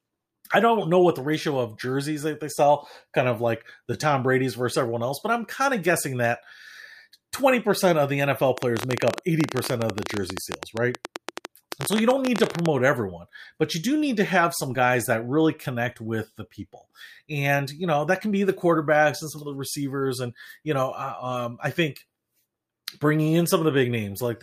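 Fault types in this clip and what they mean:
Train of clicks: from 8.58 to 12.67 s, unevenly spaced pops tick through the speech at about 15 per second, around seventy in all, peaking about 15 dB above the speech. The likely cause is electrical interference or a faulty connection or power supply.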